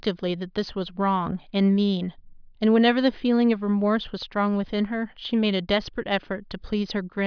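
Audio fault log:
No faults detected in this speech recording.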